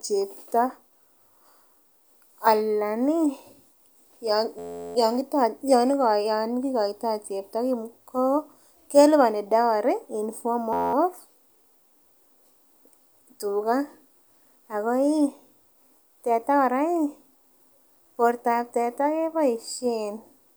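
At 4.59 s and again at 10.73 s, just after "keliboni dowry in form", the playback suffers a system hang loop: the driver stalls while the hardware keeps replaying one 11.6 ms chunk, which fits a 512-sample buffer. This yields a steady 86 Hz buzz lasting 0.37 s and then 0.21 s, with essentially nothing skipped afterward. A waveform shows one identical cycle tiled end to end; a spectrogram shows a dense comb of harmonics spaced 86 Hz apart.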